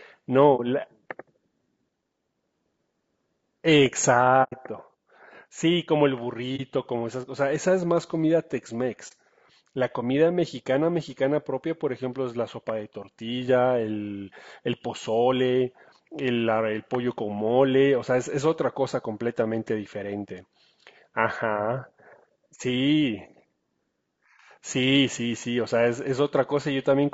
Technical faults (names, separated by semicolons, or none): low-delay AAC compression; AAC frame loss with muting